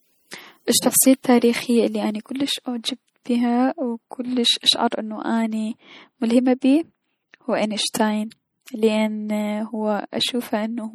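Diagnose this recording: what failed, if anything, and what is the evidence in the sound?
MP3 compression runs throughout this speech, at the codec stage. The damage is plainly audible, and the sound fits a low bitrate of around 48 kbps. The likely cause is lossy encoding that cut the treble and dropped weak frequency lines, which switch on and off between frames.

Pre-echo occurs at 4.91 s (after "كلس اشعر", before "انو اني"), 6.61 s and 7.94 s, again at the codec stage. A brief hiss of 12 to 17 ms precedes each attack because quantisation noise spread across the transform block leaks into the quiet moment before the onset.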